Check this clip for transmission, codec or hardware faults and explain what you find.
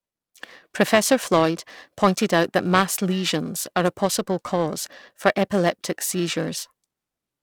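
There is one fault, present for the whole clip: periodic clock jitter. The converter's sampling clock wobbles at a steady rate of around 1 kHz. Each frequency in the speech gains sidebands spaced that far above and below it, strongest on higher frequencies. The result is a rough, metallic edge that disappears in pauses.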